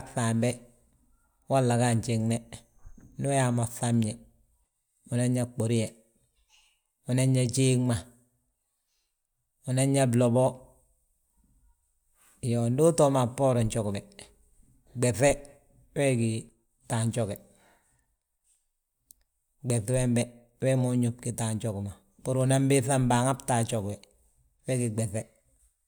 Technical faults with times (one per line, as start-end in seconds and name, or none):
none